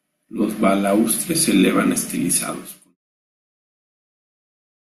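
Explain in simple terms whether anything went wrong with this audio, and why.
Nothing went wrong with this audio; the speech just fades out gently, as an editor would end a clip, starting around 2 seconds and reaching silence at 2.97 seconds.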